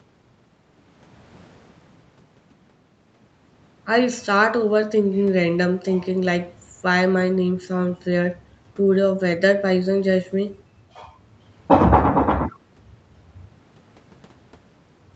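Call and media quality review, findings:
No faults found; call path and microphone processing normal.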